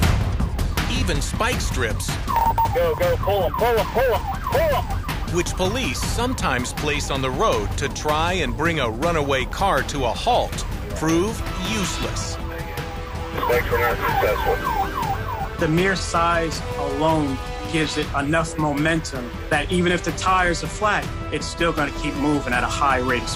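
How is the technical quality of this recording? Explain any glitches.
No glitches turn up anywhere in the recording; the signal stays continuous and intact throughout, with nothing that would point to a problem in capture, transmission or playback.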